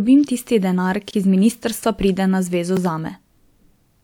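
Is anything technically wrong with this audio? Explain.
Yes, there are two blocks of digital silence in this speech. The first runs from 1.11 to 1.13 s, right after "tisti denar". About 23 ms of audio drops to zeros, which fits a 1024-sample buffer that never got filled in time. The second is at 2.77 s, just after "ministrstva pride na zvezo", and lasts about 1.75 ms. The signal cuts to zero and back with no fade. The longer gap sounds like a brief hole, and the short one is just a tick.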